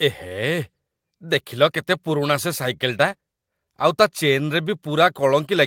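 Clock drift between sender and receiver runs through the whole clip of speech. The sending clock is about 3 percent slower than the receiving one, so the jitter buffer keeps draining and the receiver has to pad the stream to keep playback going.

Repeated timing corrections follow from 0.28 to 5.57 s. The receiver repeats short pieces at uneven intervals, stretching the speech to 97 percent speed and adding roughly a fifth of a second overall. Each of these edits is small.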